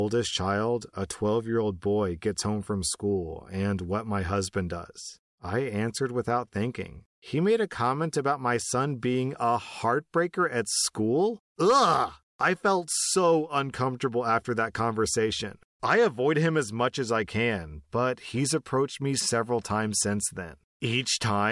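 No technical faults can be heard anywhere in the recording; the speech signal stays steady and intact throughout.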